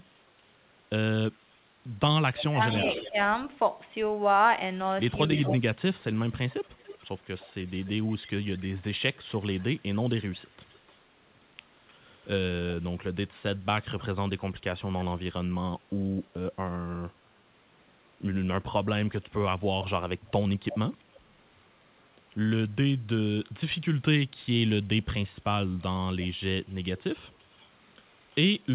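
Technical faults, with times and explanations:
2.36–3.09 s, echo leak: a delayed copy of the speech returns 280 ms late, about 10 dB below it, likely loudspeaker pickup the far-end echo canceller did not remove.
2.50–3.17 s, speech suppressed in double talk: the talker dips in pieces by up to about 20 dB, roughly a third of a second in all, likely the echo canceller ducking overlapping speech.
5.33–12.27 s, echo leak: a fainter copy trails the speech by 295 ms through this stretch, about 20 dB down, likely residual loudspeaker pickup passing the echo canceller.
5.51–5.81 s, speech suppressed in double talk: a brief dip of up to about 25 dB, roughly 0.2 s in total, likely the canceller attenuating the talker while both sides spoke.
20.70–20.77 s, echo leak: a short scrap of returned speech at 324 ms delay, about 15 dB down, likely a momentary lapse in echo cancellation.
25.63–28.35 s, echo leak: a faint copy about 30 dB below the speech follows at 339 ms delay, likely loudspeaker sound left uncancelled.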